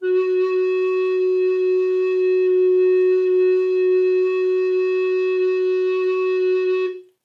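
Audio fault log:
No faults found in the music.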